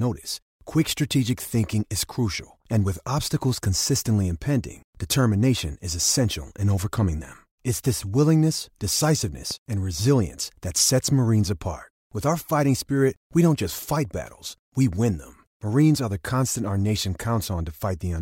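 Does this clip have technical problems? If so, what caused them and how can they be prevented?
Yes. A loud pop occurs at 9.51 to 9.54 s, just before "and resilience that sets", peaking a few decibels above the speech. It sounds like a single sharp voltage pulse, likely from a plug, switch, static discharge or driver glitch, added on top while the speech continues underneath. To prevent it, secure connections, avoid switching equipment or touching cables during recording, and ground the setup against static.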